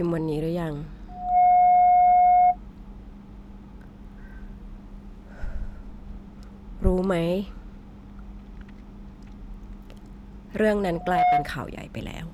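A microphone is picking up the loudspeaker it feeds, and the loop gain tips past one at 722 Hz, causing loudspeaker feedback squeal. From 1.08 to 2.57 s the speech is swamped by a steady tone that swells within about a third of a second to roughly 15 dB above the voice. It returns more briefly from 10.93 to 11.53 s, somewhat quieter at around 10 dB above.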